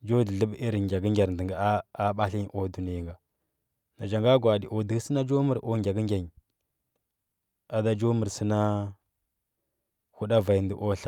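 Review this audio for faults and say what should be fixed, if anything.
No faults turn up in this audio, so nothing needs to be fixed.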